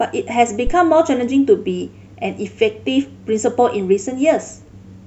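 Speech, with a phantom power thump from 0.67 to 0.74 s: a deep, short low-frequency thud decaying within about 16 ms, caused by a supply switching on a live input. Unlike a plosive pop, it arrives as a single electrical step, not as breath.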